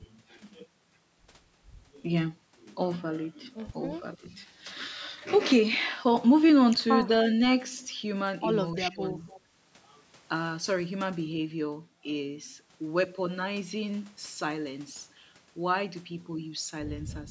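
At 4.17 to 4.24 s the talker's speech briefly dips by about 15 dB, and from 8.89 to 9.19 s it sinks further, by about 20 dB, for roughly a fifth of a second. This is speech suppressed in double talk, likely an echo canceller that turned down the near talker while the far side spoke.

From 9.27 to 9.41 s a faint, delayed copy of the voice surfaces, trailing the original by 291 ms and sitting about 25 dB below the speech. This echo leak is likely residual loudspeaker sound that the far end's echo canceller let slip back into its microphone, with the band ending at 8 kHz as the call's microphone processing shapes it.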